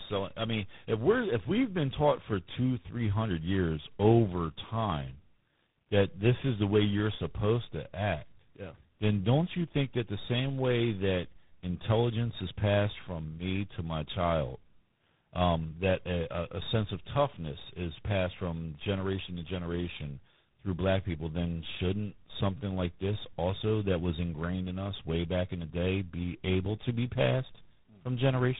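Throughout the speech, tandem speech coding is audible. The roughness and warble fit a GSM full rate stage followed, after a G.711 link, by G.726 at 24 kbit/s. The second coder requantises the first one's errors, and nothing remains above 3.8 kHz.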